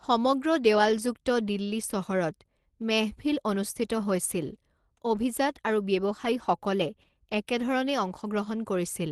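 No technical faults can be heard in this speech recording. It has passed through a call connection, and the sound stops at about 12 kHz at the top, which points to an Opus codec limited to that band.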